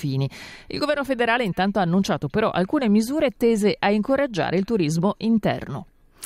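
The audio signal stays continuous and stable throughout, with no audible technical faults at any point.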